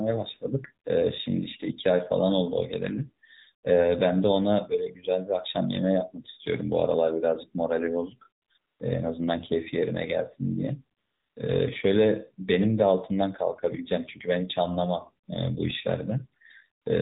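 Throughout the clip the speech carries plainly audible AMR narrowband mobile codec damage. The vocal tract model, driven by only a few pulses per subframe, makes the voice buzzy and synthetic, a coarseness that fits the 7.4 kbps mode of AMR-NB. Nothing passes above 4 kHz, so a spectrogram shows a hard ceiling there, with smeared, blocky harmonics below it. The waveform itself looks ordinary.

AMR comfort noise replaces the pauses at 8.42 to 8.50 s (80 ms), 8.58 to 8.80 s (220 ms), 10.98 to 11.36 s (380 ms), 15.26 to 15.28 s (20 ms) and 16.82 to 16.86 s (40 ms). During each one the phone stopped sending speech frames, and the receiver filled the gap with smooth synthetic hiss built from a rough level and spectrum estimate. The real background switches out abruptly and is replaced by that steady noise. A spectrogram shows uniform, featureless patches with sharp edges, and the waveform shows flat, even low-level bands.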